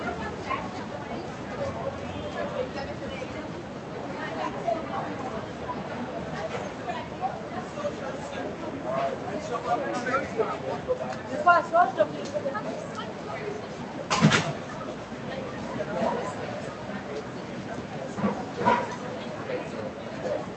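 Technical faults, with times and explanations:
Throughout: noise suppressor applied to sounds. A speech-tuned suppressor treats sustained tones, ambience and decay tails as noise and pulls them down by about 5 dB while onsets pass, so the sound pumps and thins. The call codec's top end stops near 8 kHz.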